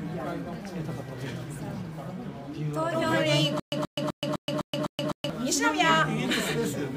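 Stutter with silent gaps from 3.60 to 5.30 s: a 129 ms burst repeats six times between 125 ms of digital silence, likely a stalled stream replaying its last fragment.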